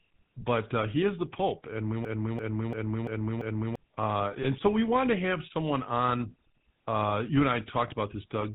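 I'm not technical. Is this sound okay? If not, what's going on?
No. There are three problems.

The whole clip went through the GSM full-rate codec, an old mobile-phone voice system. It keeps only the basic shape of the speech and drops everything above 4 kHz. That is why the voice sounds buzzy, gravelly and muffled from start to finish.

From 2.05 to 3.76 s there is a system hang loop. The computer froze, but the sound hardware kept replaying its last piece of audio. One 0.34-second snippet repeats five times, like a stutter about three times a second. About a second and a half of real speech is missing.

At 4.42 s and again at 7.88 s there are lost GSM frames. Each time, a 20 ms piece of the signal never arrived. The system filled the gap by stretching the previous sound, so you hear a brief rough, metallic blip.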